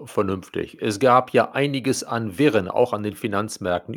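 Throughout the speech, sample clock jitter from a wobbling converter clock adds roughness about 45 dB down on loud, bright sounds. Unlike steady hiss, it vanishes in pauses.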